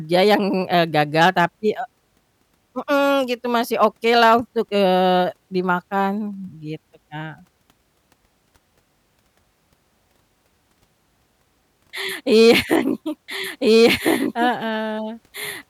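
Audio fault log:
13.28 s to end: doubled audio track. A second full-band copy of the speech, about as loud, enters abruptly roughly a second and a half behind. It is likely a second capture path.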